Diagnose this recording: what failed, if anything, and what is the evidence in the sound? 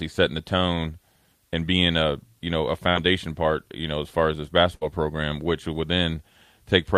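A burst of packet loss on the network path interrupts the speech twice: at 2.89 to 2.98 s, between "a you know a" and "part you know as", and at 4.75 to 4.84 s, between "as far as this" and "program which would". Each time the receiver's concealment extends the last sound for roughly 60 ms, fading it as it goes, then playback jumps ahead. About 60 ms of the original speech is missing at each point.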